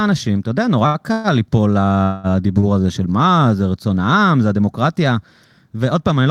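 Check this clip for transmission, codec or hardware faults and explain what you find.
The speech has two kinds of network-related fault, four events in all: two short stalls from a late packet and two call audio freezes. Nothing is lost in any of them. Each adds time, so the speech finishes later than it began.

Short stall from a late packet, at 0.86 to 0.97 s and 2.60 to 2.66 s: the sound hangs for a moment with a faint buzzy, slightly dipped quality, about 80 ms at the first point and 30 ms at the second. The next packet had not arrived when it was due and the jitter buffer emptied. The receiver stretched the last fragment until the packet came, then resumed exactly where it had stopped. Each stall delays everything after it by its own length.

Call audio freeze, at 1.12 to 1.27 s and 2.03 to 2.27 s: the speech stops moving forward and the last sound is drawn out as a fading buzz or hiss, about 117 ms the first time and 208 ms the second, without dropping to true silence. 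The likely cause is packets held up in transit until the jitter buffer ran dry, with the receiver filling the wait by extending the final sound. When delivery picked up again, the speech continued from the same point, with the inserted gap adding to the running delay.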